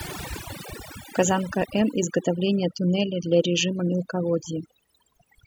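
From start to finish the speech carries overdone noise removal. A noise reduction stage was set too aggressively for a noisy recording: each frequency band that dropped near its estimate of the noise floor was pulled far down or switched off entirely, and the quieter components of the voice were removed along with the noise. Between phrases the background collapses to near silence scattered with twinkling specks.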